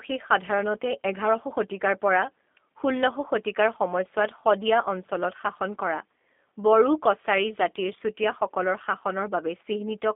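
The whole clip runs through a G.729 codec, likely G.729A at 8 kbit/s: the speech is band-limited to about 250 Hz–3.5 kHz and sounds rough and slightly synthetic, rebuilt from pulses.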